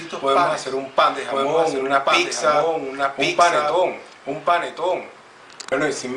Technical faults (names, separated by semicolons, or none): doubled audio track